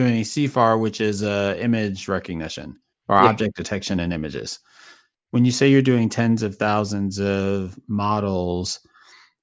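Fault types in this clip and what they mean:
None: no technical fault can be heard anywhere in this speech recording. There is nothing to list under any fault heading.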